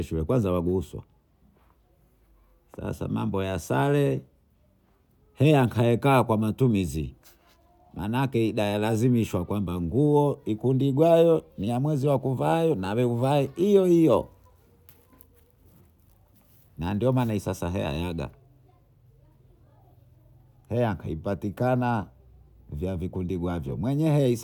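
No technical faults occur anywhere in the speech, so there are none to describe in time order.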